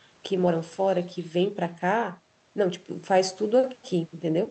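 No faults in the speech; it carries the ordinary coding texture of a call path, with content stopping around 8 kHz, which fits an Opus codec.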